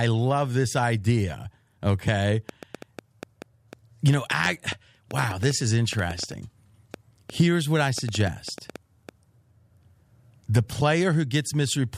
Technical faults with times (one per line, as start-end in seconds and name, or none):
2.49-9.10 train of clicks